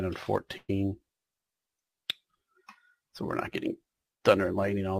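A call audio freeze runs from 0.57 to 0.71 s. For about 112 ms the gap is filled: the last bit of sound is stretched into a fading continuation, which ends in about 30 ms of silence before the audio resumes where it left off. This is likely packets held up in transit, so the jitter buffer ran dry and the receiver filled the wait. Nothing is lost, but everything after this point arrives 112 ms later.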